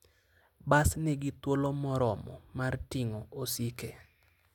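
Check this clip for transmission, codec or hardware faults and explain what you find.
Nothing in this speech recording points to a transmission, codec or hardware problem, so there's nothing to flag here.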